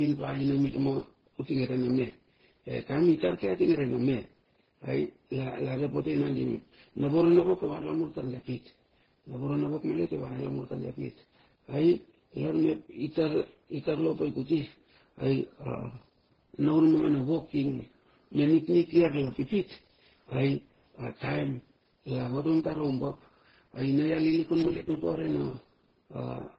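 Speech throughout, with layered, smeary artefacts and nothing above 6 kHz, which points to transcoding between lossy codecs, likely low-rate MP3, then Opus, then Vorbis.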